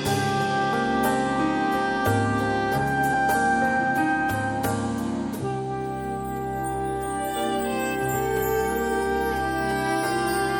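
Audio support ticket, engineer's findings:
Watery, swirly texture throughout, smeared attacks. Likely MP3 compression at a low bitrate, consistent with about 64 kbps; weak frequency lines dropping in and out per frame.

Compressed frames skipped at 0.72 s and 3.12 s. Brief smeared blips where audio jumps ahead about 30 ms and about 70 ms, consistent with one and three 26.1 ms frames lost or rejected by the decoder.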